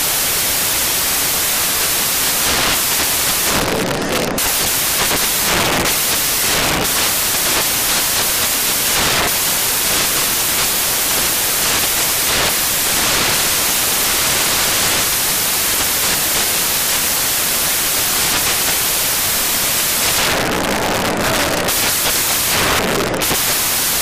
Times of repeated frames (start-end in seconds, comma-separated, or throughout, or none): none